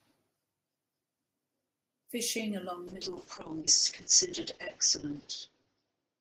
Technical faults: call bitrate drop

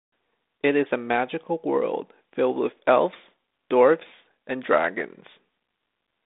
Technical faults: none

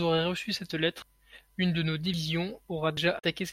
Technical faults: dropped buffer (overrun); damaged data in a compressed stream

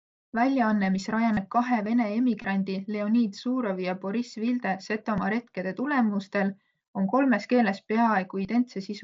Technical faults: concealed Bluetooth headset packet loss

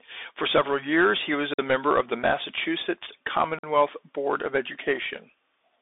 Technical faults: Bluetooth CVSD headset codec; gap between chunks

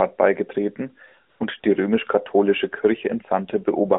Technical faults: AMR comfort noise

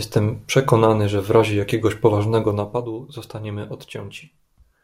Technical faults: zipper noise

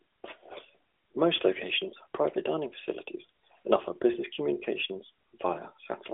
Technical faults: none

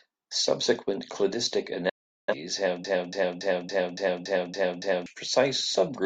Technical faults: digital broadcast dropout; broken-record loop

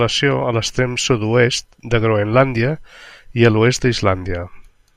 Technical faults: none

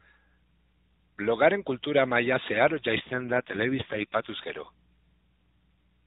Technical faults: AMR rate drop

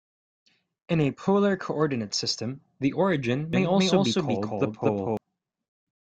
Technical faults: doubled audio track

